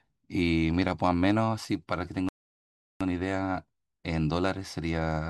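The player's buffer ran dry partway through this speech clip, causing a rebuffering stall from 2.29 s to 3.01 s. With no downloaded audio left to play, playback simply halted and waited for more data to arrive. The speech drops abruptly into silence for about 0.72 s, then picks up at exactly the point where it stopped. Nothing is skipped or repeated, but the pause stretches the clip's timing.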